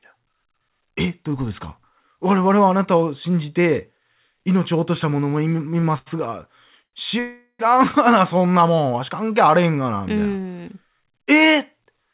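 Three short stalls from a late packet come first, at 5.80 to 5.84 s, 5.98 to 6.08 s and 6.84 to 6.95 s. Each time a packet was not there on schedule, and the jitter buffer ran dry. The receiver held the last sound for about 24 ms, 77 ms and 91 ms, then carried on from the same point. Nothing is lost. The speech simply drags, with a faint buzz or dip, and each stall pushes everything after it a little later.

A call audio freeze follows from 7.19 to 7.61 s. The cause is likely packets held up in transit, emptying the jitter buffer. The receiver stretched the last sound into a fading buzz or hiss for about 400 ms. That includes roughly 60 ms of silence at the end. The speech then resumes where it stopped, so a gap has been inserted rather than anything removed. The audio here is band-limited, with nothing above 4 kHz, which fits a narrowband call codec.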